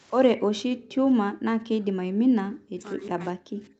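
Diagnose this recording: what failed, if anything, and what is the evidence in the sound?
Echo leak at the far end's echo canceller, likely from a loudspeaker-to-microphone path. Between 0.35 and 0.41 s a faint, delayed copy of the speech comes through, about 212 ms behind the original and roughly 25 dB below it. The canceller's adaptive filter did not fully model the acoustic return, so a short residual slipped past suppression and was sent back down the call, heard here as a brief ghost of the talker.

Speech suppressed in double talk, in the call processing stage. From 0.37 s to the end of the clip the talker's level drops in pieces, at its deepest by around 40 dB, while the other side is active. The echo canceller likely misread the overlapping speech as echo and applied heavy gain reduction to both. This pumping and cutting sits on top of the call's 8 kHz band limit from the Opus path.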